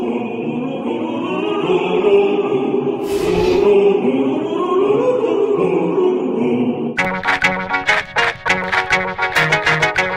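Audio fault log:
No faults were found anywhere in this audio. Nothing in the sound calls for an entry in the log.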